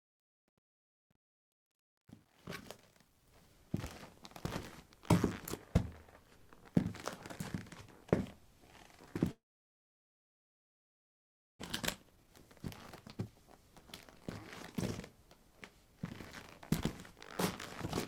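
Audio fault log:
0.00–3.53 s, truncation distortion on a fade: The smooth fade-in is carried at about 10-bit resolution without dither, so its quiet start, worst up to 3.18 s, breaks into gritty square steps. Plain hiss or a noise gate would not crumble in step with the level.
9.31–11.65 s, long network dropout: The sound stops, a short fading buzz or hiss continues the last moment, then 2.19 s of near silence follows. This is likely a network dropout. About 1.6 s of sound is lost, and the return shows a jump in content rather than a natural pause.
11.81–13.36 s, jitter buffer speed-up: After the gap, the sound runs at 128% speed with its pitch unchanged, hurried, as tiny pieces are cut repeatedly to shed roughly 0.4 s of built-up delay. A resampling speed-up would raise the pitch as well.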